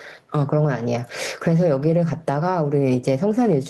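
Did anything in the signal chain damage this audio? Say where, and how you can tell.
Yes. The input gain was likely set far too high for the microphone, with a fast limiter or compressor at the input or in the call processing then clamping the level back down on each loud sound. The result is gain pumping throughout the speech, with the gain swinging by something like 15 dB. Loud and quiet passages sit unnaturally close in level, leaving the whole clip squashed.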